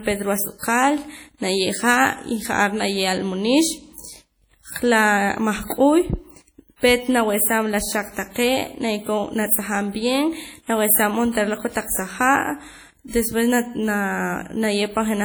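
The whole clip has a heavy washy, ringing quality, with a hiss that swells and fades along with the speech. That's most likely WMA compression at a low bitrate, something in the region of 32 kbps judging by how much damage there is. The transform blocks are long, so quantisation noise smears across tens of milliseconds, and weaker detail simply drops out, leaving the speech swirly throughout.

On top of that there are four pre-echo spots, where a short hiss arrives just ahead of a sharp onset: 0.58 to 0.63 s (about 45 ms of smear), 9.46 to 9.51 s (52 ms), 11.33 to 11.35 s (27 ms) and 13.08 to 13.13 s (56 ms). In each case the attack sits late in a coding block, so the noise budgeted for the loud part leaks into the quiet gap before it. That softens and blurs the attack.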